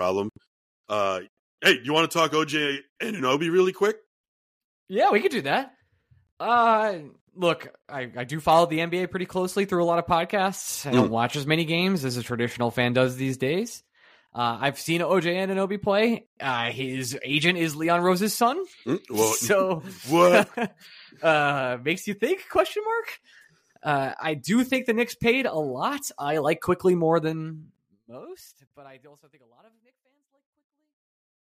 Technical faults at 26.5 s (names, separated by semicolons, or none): none